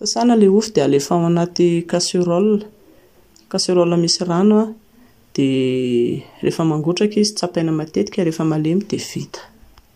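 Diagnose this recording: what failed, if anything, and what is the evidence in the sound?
No technical faults detected.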